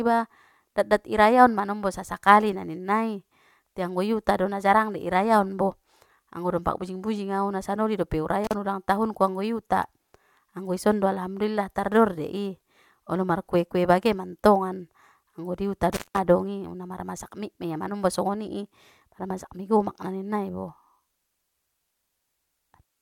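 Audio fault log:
8.44–8.54 s and 15.93–16.18 s, intermittent contact: a loose cable or plug briefly opens the signal path, so the speech drops out for about 39 ms, then about 186 ms. Crackle marks each break and reconnection, and faint hiss fills the gaps.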